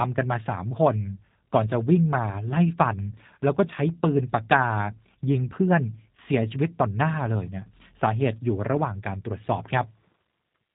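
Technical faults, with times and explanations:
Throughout, G.729 codec: the speech has been squeezed through a low-rate CELP voice codec, consistent with G.729A at around 8 kbit/s, and the damage is plainly audible. Each 10 ms frame is rebuilt from a vocal tract filter, a pitch predictor and a few fixed pulses, so the voice comes across rough and slightly synthetic. Nothing above 4 kHz survives, which leaves the sound dull and muffled with no sibilant brightness.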